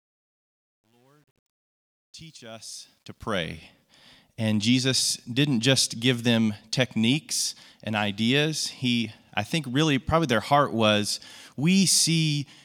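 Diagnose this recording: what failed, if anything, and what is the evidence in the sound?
A gain or word-length stage truncated the fade-in without dither, producing truncation distortion on the fade, consistent with roughly 10-bit resolution. From 0.0 to 3.58 s the rising speech sounds stepped and gritty, worst before 2.65 s, until the fade completes cleanly.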